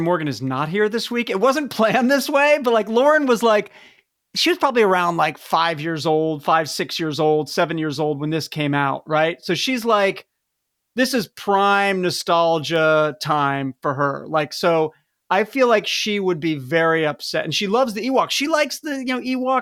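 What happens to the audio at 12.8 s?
At 12.76 s a sharp snap cuts across the speech, just before "time for her". It is an electrical switching spike. It is a brief transient that sits on top of the voice rather than replacing it. It peaks at about -20 dBFS. The likely cause is a nearby switch, motor or static discharge arcing for an instant. The audio line picks up that burst of interference and adds it to the signal as a click.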